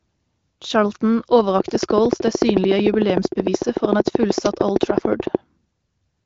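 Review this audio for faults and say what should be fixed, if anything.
There's a train of clicks running from about 1.60 s to 5.36 s: a steady ticking at roughly 13 per second, evenly spaced, so around fifty near-identical pulses in all. They stick out a lot, peaking somewhere around 20 dB above the speech, and you hear them in the gaps as well as over the talking. That regular pacing most likely comes from electrical interference or a faulty connection or power supply. The light AMR-WB coding underneath sounds like a higher-rate setting and isn't the culprit. To prevent it, check grounding and cabling, move the rig away from noisy gear, and make sure the interface isn't dropping out.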